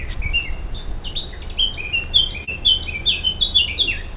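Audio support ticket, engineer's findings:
Short concealed packet loss, 2.44–2.50 s: brief smear where about 40 ms of audio went missing and roughly 33 ms was synthesised by the receiver's concealment, extending the preceding sound before crossfading back. Probable component: network/jitter buffer. Call path band-limited at 4 kHz, consistent with G.711 A-law.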